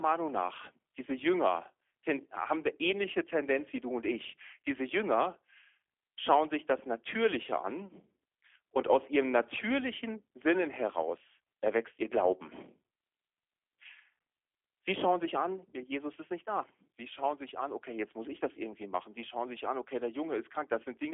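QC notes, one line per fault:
Throughout: G.729 codec. The speech is rebuilt from a vocal-tract filter and sparse pulse excitation, so it sounds plainly rough and slightly synthetic, consistent with an 8 kbit/s G.729A link. A spectrogram shows a 300 Hz to 3.4 kHz telephone band, empty above 3.6 kHz.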